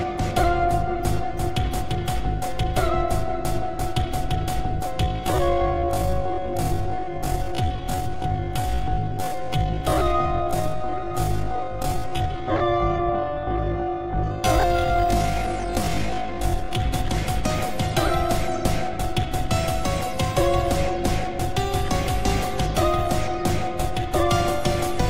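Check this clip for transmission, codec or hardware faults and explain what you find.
There's one fault to flag: a time-stretched section running from 5.02 s to 16.8 s. In that stretch the pace drops abruptly to about half speed (0.523x) while the pitch holds steady, and the audio drags. That's most likely software stretching the audio to fill a longer slot, keeping the pitch by repeating short slices.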